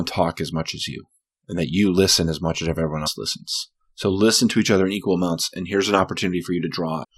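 Damaged data in a compressed stream shows up twice in this speech. Corrupted bytes in the encoded file throw the decoder off. It misreads the affected frames, loses sync and has to hunt for the next valid frame header. At 3.06 s this comes through as a very short glitch that breaks into the speech. A second, similar glitch follows from 7.03 to 7.05 s, near the end of the clip.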